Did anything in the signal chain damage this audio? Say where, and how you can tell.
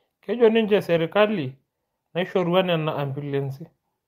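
Yes. The sender's clock runs about 4% slower than the receiver's, so this is clock drift between sender and receiver at the network jitter buffer. Because the sender delivers fewer samples than the receiver consumes, the buffer keeps draining. The drift is present for the whole of the speech. It shows up as a faint, persistent unsteadiness in timing rather than any single obvious glitch.

The receiver answers with repeated timing corrections from 0.51 s to 3.75 s, padding the stream by repeating short slices so playback runs at about 95% of normal speed. Together these repeats add roughly 150 ms. They all push in the same direction but land at uneven intervals. Each is small, so they are heard, if at all, as slight hiccups and an uneven, dragging tempo.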